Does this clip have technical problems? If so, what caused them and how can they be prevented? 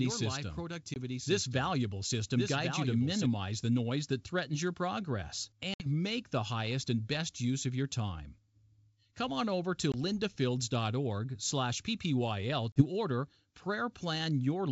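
Yes. A doubled audio track runs from the start to 3.26 s, ending abruptly just before "the noise that threatens". A full-band copy trails about a second behind at about 5 dB quieter, with no decay. The likely cause is a second, slower capture path or an edit holding two copies out of step. Prevent this by routing the source through a single capture path and checking edits for duplicate overlapping regions.

Packet loss on an ADPCM call leaves hard-edged silent gaps at 0.94 to 0.96 s, 5.74 to 5.86 s (between "that threatens your progress" and "make the highest and"), 9.92 to 9.96 s (after "on over to"), and 12.72 to 12.82 s. The gaps last 20, 60, 20 and 40 ms, consistent with one to three lost 20 ms packets. After each gap, the decoder's predictor and step size have drifted from the sender's, so the audio returns slightly distorted before settling. Prevent this with a network that provides jitter buffering and packet-loss concealment that keeps the decoder state in step.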